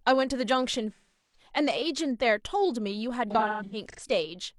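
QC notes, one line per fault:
0.92–1.50 s: AAC frame loss with concealment. About 384 ms missing, consistent with nine frames. The decoder reuses the last spectrum, so the speech smears, then fades. On a spectrogram it shows as a blurred, flattened band dimming toward silence.
3.30–4.00 s: AAC frame loss with concealment. Losses scattered over 683 ms, the longest gap around 150 ms, give phasey, noisy patches. They appear as repeated smeared spectrogram blocks with waveform envelope dips.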